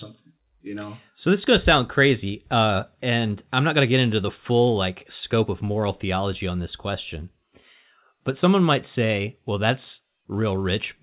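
Nothing goes wrong in this bit of speech; it came over a call line, and the sound simply tops out at 4 kHz in a way that fits ordinary G.711 A-law telephone coding.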